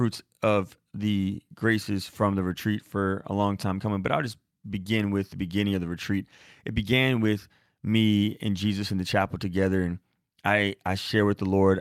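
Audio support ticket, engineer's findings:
Speech playback checked over the whole clip; no audible defects found, no component implicated, no action required.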